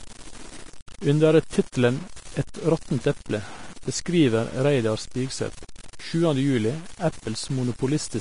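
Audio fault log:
throughout: low bit depth without dither. Quiet passages of the speech turn grainy and gritty, with a rasping error only about 20 dB below the signal that rises and falls with the voice and drops to silence or sputters in pauses instead of hissing steadily. The likely cause is rounding to very few levels with no dither, which fits truncation to around 6 bits. Because it tracks the signal, it differs from added background noise or a steady hiss.
throughout: low-bitrate audio saved at a high bitrate. Nothing sits above 10.5 kHz, so sibilants sound dull and capped, and the speech carries the artefacts of a heavily squeezed codec, although the container is a high-rate MP3. That mismatch points to a low-rate source, plausibly near 35 kbit/s Vorbis, re-encoded at about 320 kbit/s. The second pass adds nothing back, so the first codec's losses remain, unlike a genuinely clean high-bitrate encode.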